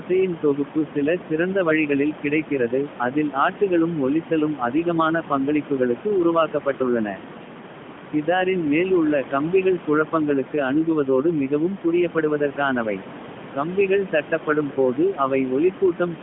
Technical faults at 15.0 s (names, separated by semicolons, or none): none